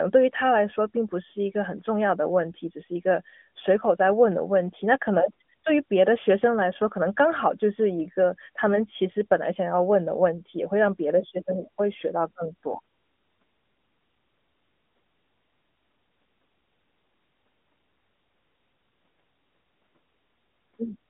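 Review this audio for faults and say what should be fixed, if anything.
Nothing needs fixing: no faults are present, and the speech has the expected narrowband mobile-line band of about 200 Hz to 3.5 kHz, with nothing above 3.7 kHz.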